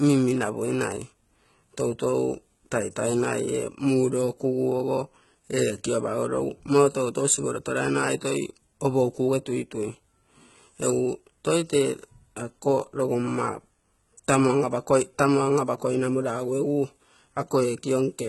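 From start to finish the speech carries heavy HE-AAC compression damage. The treble is rebuilt rather than coded, so s sounds turn gritty and metallic. Nothing reaches above 11.8 kHz. A very low bitrate is the likely cause.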